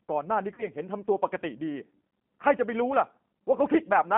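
The whole clip runs through the G.729 codec, and the damage is plainly audible. The speech has that slightly rough, synthetic edge you get when a codec rebuilds the voice from a vocal-tract filter, a pitch predictor and a few pulses per frame rather than sending the waveform. The sound sits in a narrow line band of 150 Hz to 3.4 kHz, with nothing bright on top. That texture fits the 8 kbit/s G.729A variant.

From 0.54 to 0.64 s there's a spot of VoIP packet loss concealed by the speech codec. About 40 ms of audio went missing, which fits two lost 20 ms packets. The decoder fills the gap by carrying its last pitch and filter forward at lower and lower gain, so the speech is stretched into a sound that fades. Because each frame builds on the one before, the voice stays weak or distorted for a moment after the packets come back.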